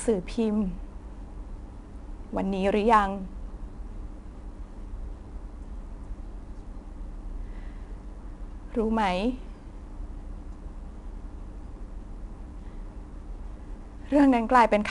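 Speech carrying 4-bit ADPCM compression throughout: a gritty hiss rides on every loud syllable and roughens sharp onsets, with nothing above about 10.7 kHz, which points to roughly 89 kbps. The noise tracks the level, unlike a steady noise floor, and lacks the warbling swirl of low-bitrate perceptual codecs.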